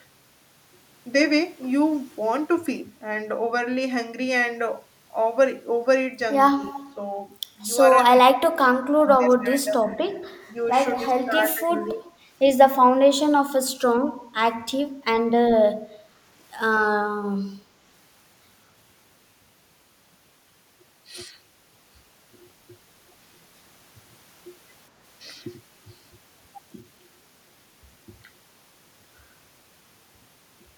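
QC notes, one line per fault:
6.55–6.96 s, 7.94–12.09 s, 12.81–13.12 s and 13.85–14.0 s, speech suppressed in double talk: the talker keeps ducking away in pieces, worst in the long 7.94–12.09 s stretch where about two seconds get pulled down by around 20 dB. The shorter spots dip by around 15 dB. Likely the far end was talking at the same time, and the echo canceller couldn't tell our talker from its own loudspeaker echo, so it turned everything down.
6.69–6.8 s and 8.33–8.38 s, echo leak: short scraps of a delayed copy of the voice slip through, trailing by 197 ms. The first is faint, about 20 dB under the speech. The second is only about 10 dB down. This is likely a loudspeaker on one side whose echo canceller didn't fully clean up what its mic picked up, so the leftover got sent back.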